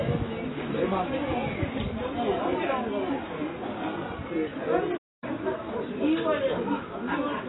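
From start to finish the sound is dull and smeared, with a fizzy, warbling texture and nothing above about 3.9 kHz. This is likely heavy AAC compression, which fits a very low bitrate of around 16 kbps that forces a low cut-off and coarsely quantised spectral detail.

From 4.97 to 5.24 s the audio cuts to silence for roughly a quarter of a second before it continues. This is likely a playback stall, where the player ran short of data or its thread was held up.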